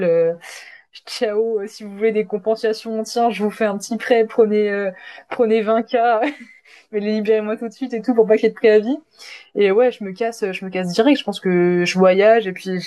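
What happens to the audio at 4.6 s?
Nothing goes wrong at 4.6 s; the speech carries on intact through that moment, with no dropout, click or distortion.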